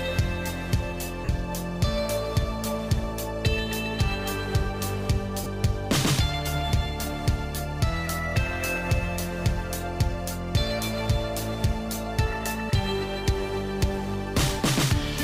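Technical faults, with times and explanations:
1.25–1.29 s, lost LE Audio frames: a 40 ms gap, consistent with four 10 ms frames, is filled by repeating the last spectrum with scrambled signs, so the sound smears into noise.
5.44–5.46 s, lost LE Audio frames: a shorter 20 ms dropout, consistent with two frames, is concealed the same way, leaving a brief noisy blur in place of the sound.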